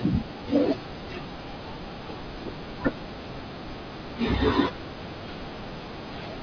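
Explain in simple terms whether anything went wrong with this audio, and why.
Nothing went wrong with it.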